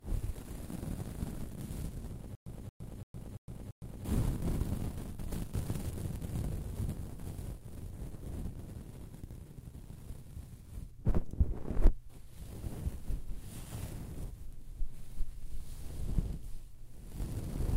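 From 2.35 to 4.05 s a stall in playback likely causes a stutter with silent gaps: a 227 ms fragment repeats five times, each followed by 112 ms of silence.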